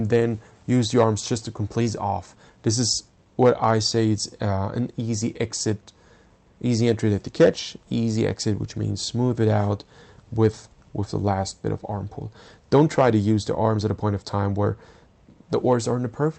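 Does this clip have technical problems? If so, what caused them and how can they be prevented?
Yes. At 1.81 s there is a skip ahead: roughly a second of audio was dropped while later audio was already buffered, so playback jumps forward with no gap. On a waveform the two sides butt together abruptly, and a spectrogram shows a sudden change in pattern with no silent column between them. Keeping the jitter buffer from overflowing, through steadier network delivery or more buffer headroom, would prevent it.

From 1.98 to 3.26 s comes a jitter buffer speed-up. The buffer held more than its target, so the receiver cut short pitch-period pieces again and again, about 150 ms in all. The audio runs at 110% speed with unchanged pitch and sounds hurried. A spectrogram shows events compressed closer together in time while harmonic spacing stays the same. Smoother packet arrival, or a gentler catch-up rate, would prevent it.

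The call path's Opus coding, which fits a bitrate around 32 kbps, cuts off everything above 8 kHz, visible as a flat ceiling across the spectrogram.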